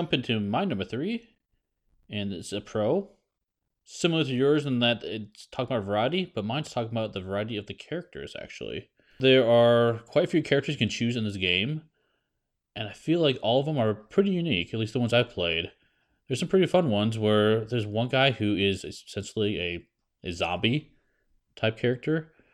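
No technical faults can be heard anywhere in this speech recording. There is nothing to place on a timeline, so no moment calls for a time or a value.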